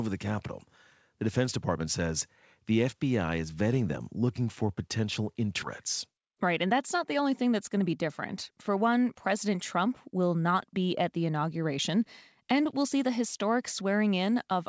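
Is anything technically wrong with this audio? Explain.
Yes. At 5.62 s there is a skip ahead. About 0.4 s of speech is missing. It was dropped while later audio waited, so the two sides join with no gap.

A jitter buffer speed-up follows from 5.84 to 8.03 s, then another from 8.51 to 10.20 s. The buffer was holding too much audio, so the receiver cut short pitch-period pieces repeatedly. It removed about 150 ms, then about 100 ms. Speech runs about 5 to 6 percent fast at unchanged pitch and sounds hurried.

The clip passed through a G.722 call path at 64 kbps, so nothing is heard above 8 kHz.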